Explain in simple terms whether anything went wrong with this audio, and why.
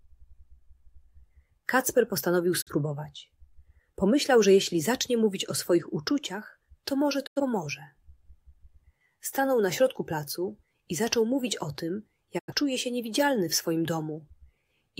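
Yes, there are three short digital broadcast dropouts, at about 2.6 s, 7.26 s and 12.38 s. Each time the receiver lost a frame or two of the signal and muted briefly, with a quick fade out. The first gap is shorter than the other two, and whatever was sent in those gaps is gone.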